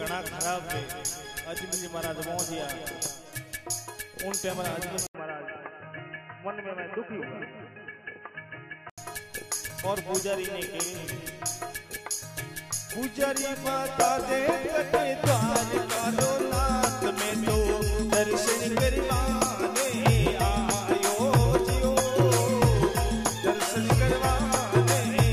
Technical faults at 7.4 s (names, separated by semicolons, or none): input switched to a poorer device